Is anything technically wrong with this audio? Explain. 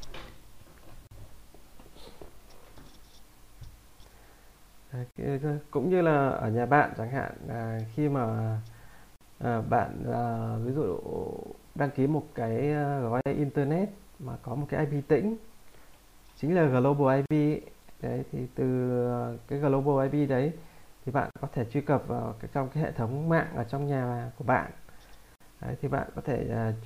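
Yes, there's a recurring dropout. It's a gap at a join of encoded pieces, showing up at 1.07, 5.11, 9.16, 13.21, 17.26, 21.31 and 25.36 s, so every 4 s. Each time the sound cuts to silence for about 40 ms on the first one and 49 ms after that, with softened edges, then picks up where it left off. It sounds like 4-second chunks were encoded separately and butted together untrimmed, so each join keeps the encoder's start-up delay and last-frame padding as dead air.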